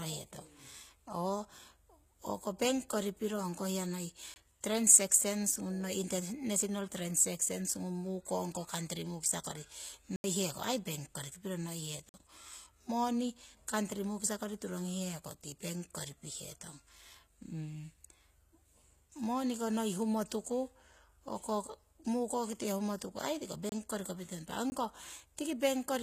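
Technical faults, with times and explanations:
throughout: HE-AAC compression, likely at a low bitrate near 20 kbps. Rebuilt treble above the coded band makes sibilants gritty and metallic, with nothing above 14.9 kHz.
4.34–4.36 after "piro ongko hiya noiyi", 10.16–10.24 after "mukisa kori", 12.09–12.14 after "koriki piro", 23.69–23.72, 24.70–24.72: block of digital silence. The output buffer probably went unfilled, so the sound cuts abruptly to silence and back, leaving holes of 20 to 80 ms.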